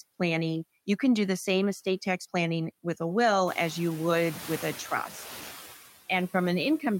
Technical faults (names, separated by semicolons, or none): noise suppressor artifacts